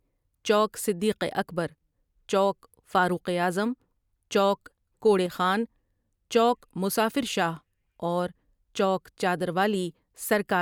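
At 5.26 to 5.31 s, just after "چوک کوڑے", the speech dips abruptly by about 6 dB. This is likely one channel dropping out, halving the mono sum.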